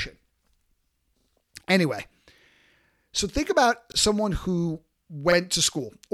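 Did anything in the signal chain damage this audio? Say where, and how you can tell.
Yes, it's a driver or buffer problem: a repeated buffer. You can hear the same short slice of speech stutter with hard joins at 1.2 to 1.28 s (two extra plays), 2.52 to 2.68 s (four, the longest), and 3.92 to 3.96 s and 5.32 to 5.36 s (one each). Each repeat is 40 ms long, which fits a 40 ms buffer being replayed whenever fresh audio missed its deadline. Practically nothing is lost; the audio just stalls and then carries on.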